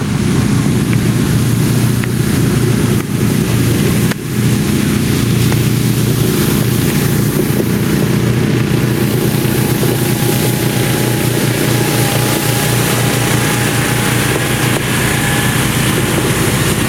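Gain pumping runs throughout this recording of sounds: the gain swings by around 15 dB, squashing loud and soft parts closer in level, likely from excessive input gain driving a fast limiter.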